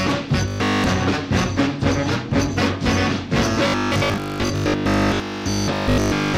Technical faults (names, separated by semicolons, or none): robotic sound from repeated short buffers